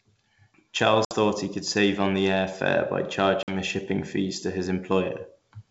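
Packets dropped twice on this ADPCM call, a speech recording carried over G.722 wideband telephone coding. Each gap of about 60 ms and then 50 ms, likely several packets, was filled with silence, throwing the decoder's adaptive predictor and step size out of step with the sender's. The result is a hard-edged hole at 1.05–1.13 s, just before "thought he could save", and another at 3.43–3.55 s, between "the air fare by" and "the shipping fees to".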